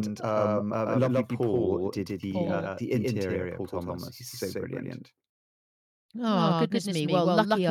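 From the very start to the end, the speech has a doubled audio track: a second, full-band copy trails the original by roughly 150 ms at about the same level, so every syllable gets a crisp, flat slapback with no decay or room colour. It's likely the same signal being mixed in twice, say captured again through a slower path or left as two out-of-step copies in an edit.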